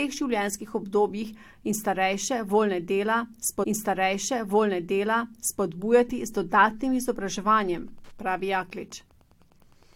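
At 3.63 s, right after "starejše voljne dela", there's a stream segment repeated: the player queued the same chunk twice, so about 2.0 s of speech plays again until 5.63 s, with a small blip where it jumps back.

From 7.30 s, just after "z dodatnim", Wi-Fi interference comes in and runs to the end: a nearby radio's beacons, every 102.4 ms, get rectified by the audio circuit, giving a faint steady ticking roughly ten times a second, well down under the speech.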